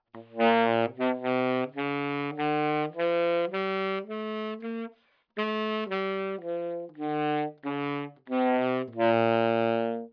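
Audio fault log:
No faults heard anywhere in these sounds.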